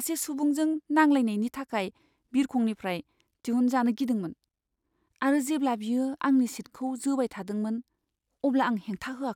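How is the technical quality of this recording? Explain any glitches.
No technical faults are audible anywhere in the speech recording, so there are no glitches to explain.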